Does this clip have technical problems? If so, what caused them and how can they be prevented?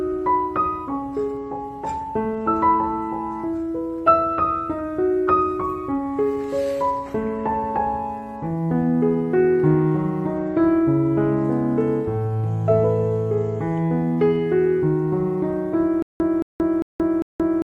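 Yes. From 16.02 s to the end, the playback likely stalled and kept retrying, replaying a 222 ms fragment four times with about 178 ms of digital silence between, a stutter with silent gaps repeating every 399 ms, losing the intended audio. Larger buffering and stall recovery that resumes rather than loops would prevent it.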